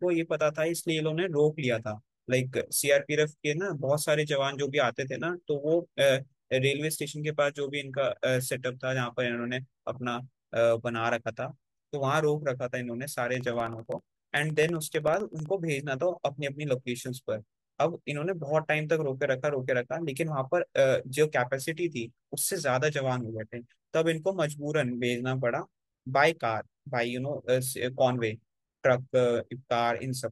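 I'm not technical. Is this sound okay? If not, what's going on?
No. Periodic USB or driver dropouts, 13.35 to 15.46 s: the audio connection stalls every 64 ms, silencing about half a millisecond, heard as steady ticking over the speech.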